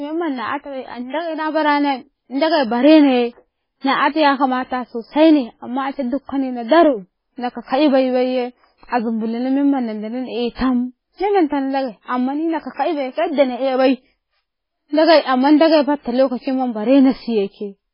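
Throughout the clip, the speech was likely squeezed through heavy MP3 compression at a very low bitrate, consistent with about 16 kbps. Short of bits, the encoder discarded everything above 5.3 kHz and dropped weak frequency lines frame by frame, leaving dull, watery, swirling speech.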